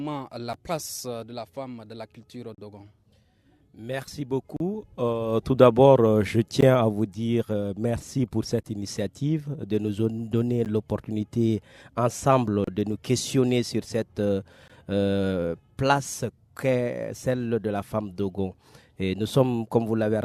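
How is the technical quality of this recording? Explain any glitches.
Quality suffers from a gap between stream segments, repeating every 2 seconds. Silent holes with hard edges appear at 0.53, 2.55–2.58, 4.57–4.60, 6.61, 8.63, 10.65, 12.64–12.68 and 14.68 s. Segment timestamps leave small gaps, which the player fills with silence. Each hole lasts about 9 to 36 ms, and no audio is lost.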